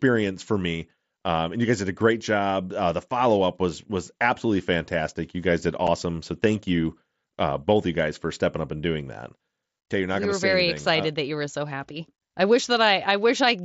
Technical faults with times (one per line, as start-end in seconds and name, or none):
5.87 unconcealed Bluetooth headset packet loss